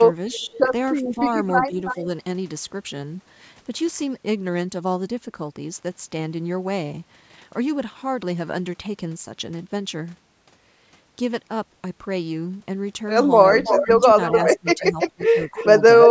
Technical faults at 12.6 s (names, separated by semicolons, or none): none